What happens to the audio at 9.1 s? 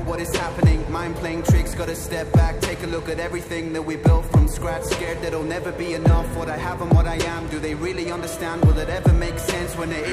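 Nothing goes wrong at 9.1 s; the audio runs through that moment intact, with no dropout, click or other fault.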